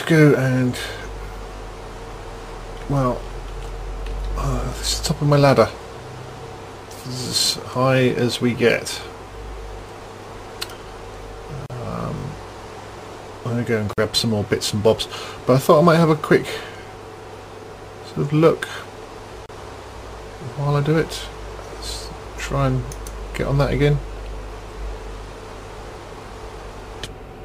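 Right at 1.56 to 1.6 s there's a repeated buffer: the device didn't get fresh audio in time, so it replayed the last 20 ms chunk twice more. With a buffer that small it comes across as a quick buzzy stutter with hard joins rather than an obvious echo, and essentially nothing gets skipped. The same thing happens at 3.24 to 3.26 s, with one extra play.

At 11.66 s there's a gap at a join of encoded pieces, a gap of about 38 ms dropped into otherwise continuous sound. Separately encoded segments were stitched together without trimming the encoder's start delay and end padding. The edges are smeared by the codec, and the sound picks up right where it left off.

At 12.18 to 12.24 s the repeated buffer is back, this time with three extra plays of a 20 ms chunk, so the buzz runs a bit longer.

Two more join gaps follow: about 46 ms at 13.93 s and about 31 ms at 19.46 s, each a brief hole with the same codec-smeared edges.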